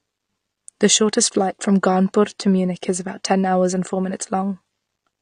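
AAC compression damage runs through the whole speech clip, likely from low-bitrate AAC-LC encoding around 32 kbps, leaving nothing above 9.8 kHz and a dull, smeared, warbling texture.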